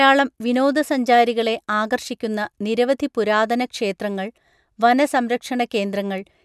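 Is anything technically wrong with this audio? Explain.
No, nothing is technically wrong.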